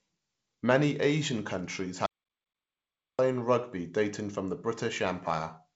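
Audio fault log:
2.06–3.19 s, audio dropout to silence: the speech cuts off mid-flow and returns about 1.13 s later, with the gap silent, not quiet room tone, so whatever was said there is lost. The likely cause is a momentary loss of input while recording continued. The waveform shows a flat line, and the spectrogram shows a fully black vertical band. Around it, the band-limited wideband sound, empty above 7.7 kHz, fits G.722 coding at 56 kbit/s.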